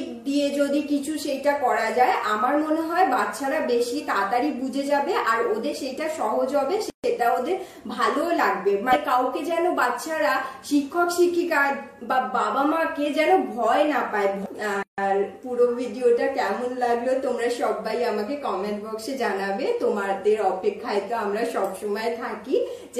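At 6.90 to 7.04 s and again at 14.83 to 14.98 s, a gap at a join of encoded pieces cuts the sound for about 138 ms and 153 ms. Encoder start-up delay and final-frame padding were left in at each join. On a waveform each appears as a flat stretch with slightly softened edges, and on a spectrogram as a blank vertical band across all frequencies, before the sound resumes.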